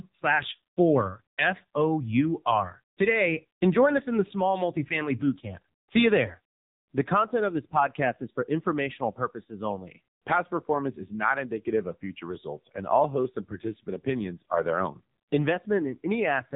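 AMR narrowband mobile codec damage runs throughout this speech: nothing above 3.8 kHz survives, and the heavy buzzy, synthetic quality points to a low mode around 6.7 kbps, where a vocal-tract model driven by sparse pulses stands in for the real waveform.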